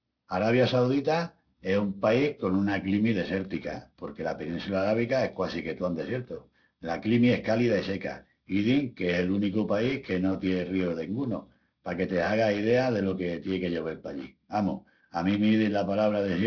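A speech recording with aliasing throughout. The spectrum runs hard up to a band edge at 5.5 kHz, and sibilants come across gritty and metallic, with folded, unrelated tones sitting roughly 20 dB below the speech. That fits a downsample from something like 48 kHz to about 11 kHz with no anti-aliasing filter, so high-frequency content above 5.5 kHz was mirrored back down into the audible band instead of being removed.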